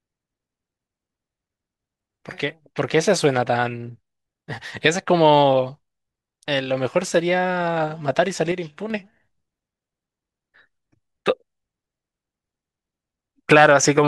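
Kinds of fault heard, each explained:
One channel drops out: from 8.52 to 8.90 s the speech falls abruptly by about 6 dB, then returns. The likely cause is one stereo channel going silent for those 0.39 s, so the mono sum carries only the remaining half of the shared signal.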